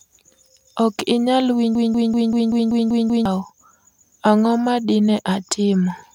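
From 1.75 s to 3.26 s the speech falls into a broken-record loop: a fragment about 0.19 s long repeats exactly, back to back, eight times, giving a rapid stuttering pulse at roughly five repetitions per second. The likely cause is a stalled player, encoder or stream that kept resending the last chunk in its buffer. Whatever should have been heard during those one and a half seconds is missing, and normal playback resumes only once the loop breaks.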